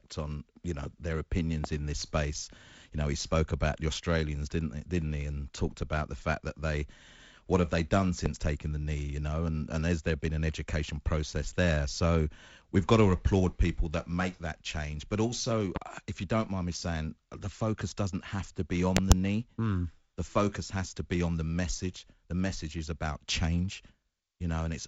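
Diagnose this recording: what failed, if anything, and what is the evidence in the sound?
Loud pops at 1.64, 8.26 and 15.76 s, plus a double pop at 18.97–19.14 s, sit roughly 15–20 dB above the speech, which carries on underneath. Each is likely a voltage pulse in the analogue wiring.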